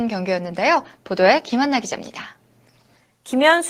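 Nothing technically wrong turns up anywhere in this short bit of speech, so there's no fault to point to and no cause to explain.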